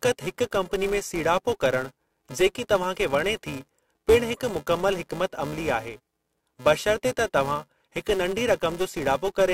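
Throughout the speech there is a steady buzz at 375 Hz. This is a filter restarted on every block. Instead of carrying its internal state across block boundaries, the filter starts each block from silence, so a small transient appears at the start of every block. At this repetition rate, which fits a 128-sample block, the transients fuse into a tone-like buzz that rises and falls with the level of the speech.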